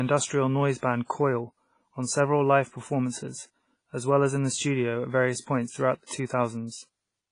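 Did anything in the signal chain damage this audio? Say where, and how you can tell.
Yes, at the codec stage. The whole clip has the ringing, washy character of a transform codec, likely WMA compression at a low bitrate, roughly the 24 kbps range judging by how heavy the damage is. Nothing is present above about 10.1 kHz, because the encoder discarded the top band, and weak spectral detail has been zeroed out. The result is dull, swirly speech with a hiss that breathes up and down with the level.

The same codec stage causes pre-echo at 6.06 to 6.10 s. A sharp attack there landed late in a transform block, so quantisation noise sized for the loud onset was spread back across the quiet moment before it. You hear about 39 ms of hiss arriving ahead of the attack, and the onset itself sounds softened and smeared rather than crisp.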